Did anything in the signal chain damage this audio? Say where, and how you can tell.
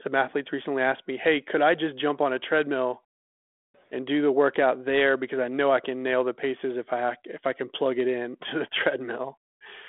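No, nothing in the signal chain damaged this audio.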